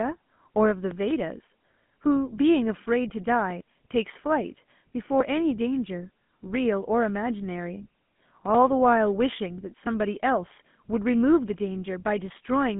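Throughout the speech, the sound carries the plainly audible damage of the GSM full-rate codec, consistent with 13 kbps. This coder models the vocal tract and excites it with a sparse, regularly spaced pulse train, which gives the buzzy, gravelly roughness heard here. A plain telephone band-limit would only narrow the sound to roughly 150 Hz to 3.5 kHz, with nothing above 3.8 kHz. The grainy texture shows that coding, not just filtering, is at work.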